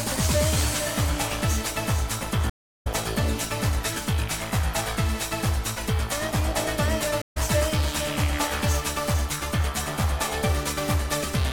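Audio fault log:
2.50–2.87 s stream reconnect: 358 ms of flat-line silence, then the audio resumes about 0.4 s further on, fading in as a fresh decoder starts, visible as a blank gap in the spectrogram.
7.22–7.37 s stream reconnect: the connection drops for 140 ms, showing as a short empty band on the waveform, and the sound picks up roughly 0.1 s later with a brief fade-in.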